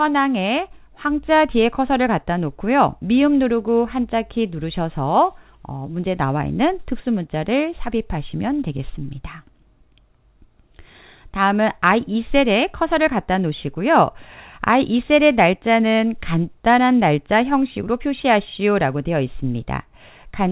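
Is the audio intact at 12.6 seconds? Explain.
Yes, the audio is intact at 12.6 seconds, carrying only the steady narrowband character of the call path, with nothing above 4 kHz, as it passes through normally.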